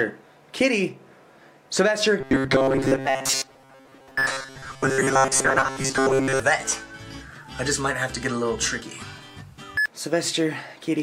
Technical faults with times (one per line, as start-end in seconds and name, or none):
2.21-6.40 robotic sound from repeated short buffers